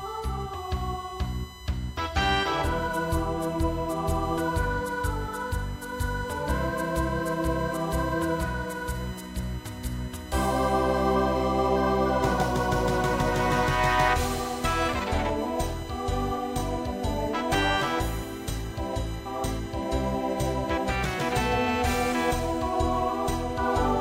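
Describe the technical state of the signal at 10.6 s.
At 10.6 s the audio carries USB whine, present for the whole clip rather than at this moment alone. Current drawn by the USB bus in 1 ms frames leaks into the power or ground, adding a fixed-pitch tone at 1 kHz with its strongest harmonic at 3 kHz, roughly 25 dB below the signal. On a spectrogram it shows as thin, steady horizontal lines at 1 kHz and 3 kHz running across the whole width.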